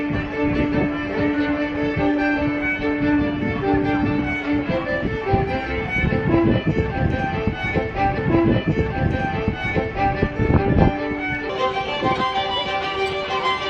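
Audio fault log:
11.49–13.69 s, section at the wrong speed: The final stretch runs about 1.32 times too fast. Pitch and tempo rise together, roughly five semitones higher, so the sound turns hurried and thin. It was likely played or resampled against the wrong clock.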